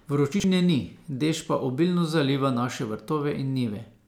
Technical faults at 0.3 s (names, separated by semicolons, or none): chunks out of order